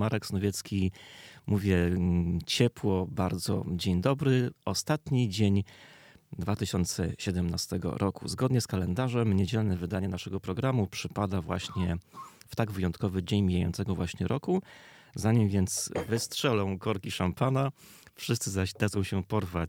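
Nothing in the sound stood out as a problem on listening.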